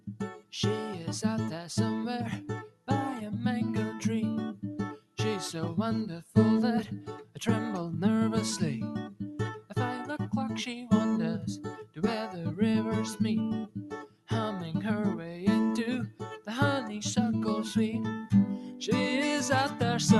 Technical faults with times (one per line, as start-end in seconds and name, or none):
0.00-20.20 noise suppressor applied to music or sounds
2.69-2.88 sound cut by the noise suppressor
4.98-5.17 sound cut by the noise suppressor
14.05-14.29 sound cut by the noise suppressor